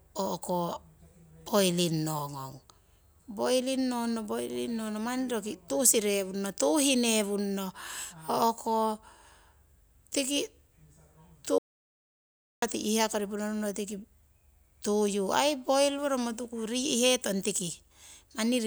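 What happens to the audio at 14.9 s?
Nothing goes wrong at 14.9 s: the speech carries on intact through that moment, with no dropout, click or distortion to be heard.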